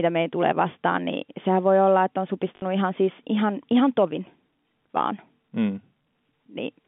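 At 2.56 s the telephone-band speech hits packet loss with the last packet repeated: about 60 ms, to 2.62 s, is filled by replaying one stretch, which fits three lost 20 ms packets. The repeats give a brief 50 Hz robotic stutter.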